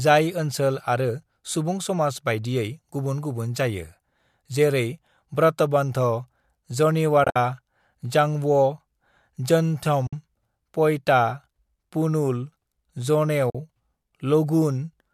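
Soft-edged dropouts gap the speech at 7.24 to 7.36 s, with about 100 ms missing across 120 ms and the longest hole around 70 ms, then at 10.07 to 10.13 s and 13.50 to 13.55 s. These are AAC frame loss with muting: lost frames were decoded as silence, so the overlapping windows fade the sound out and back in. The gap lengths fit the short frames of low-delay AAC compression, which is the likely codec here and leaves only light coding damage.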